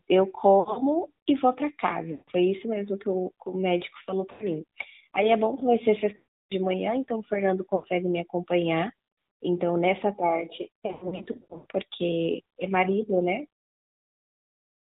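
The whole clip has been through the AMR narrowband mobile codec. Nothing above 4 kHz survives, so the speech sounds boxed-in and telephone-like. The codec rebuilds the voice from a vocal tract model fed by a few pulses. At this rate that leaves a plainly audible buzzy, synthetic edge. The damage fits a mid-rate mode around 10.2 kbps.

Lost AMR speech frames break in six times. At 0.60 to 0.80 s, about 100 ms goes missing in short runs spread over 160 ms, causing brief warbles. Losses of 160 ms at 2.12 to 2.31 s and 80 ms at 4.32 to 4.46 s sound smeared and dipped. The loss at 6.16 to 6.53 s takes out 340 ms. The sound is drawn out, then fades to silence. Another 80 ms gap sits at 7.76 to 7.87 s. At 10.86 to 11.66 s, 480 ms is lost in bursts of up to 100 ms, causing repeated dropouts. In each case the decoder repeated its last good settings at falling gain. The voice then returns weak or rough.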